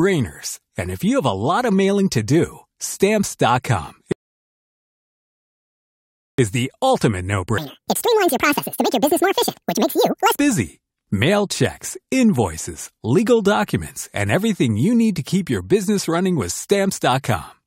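A rebuffering stall runs from 4.12 to 6.39 s: playback exhausts its downloaded audio, drops to silence for about 2.26 s while waiting for more data, then resumes at exactly the point it stopped. No speech is lost; the pause simply stretches the clip's timeline.

A section at the wrong speed follows from 7.58 to 10.39 s, playing at 1.85 times normal rate. Pitch and tempo jump together, so the speech turns hurried and roughly ten semitones higher, likely from that stretch being clocked against the wrong rate.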